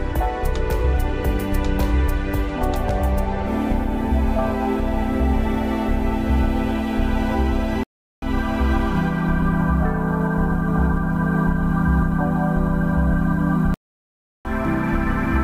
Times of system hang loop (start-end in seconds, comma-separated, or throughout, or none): none